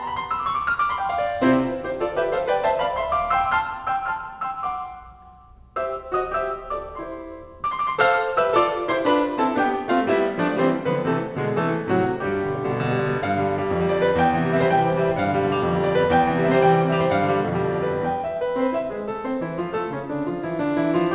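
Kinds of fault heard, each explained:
Aliasing: The music sounds as if it was resampled to a much lower rate with no filter removing the content too high for that rate. Everything above 4 kHz folds back down as false, unrelated tones. That fold point fits a new rate of 8 kHz. Bright parts like cymbals take on a gritty, metallic edge. The spectrum runs hard up to 4 kHz and stops. The folded tones sit roughly 30 dB below the music and last the whole clip.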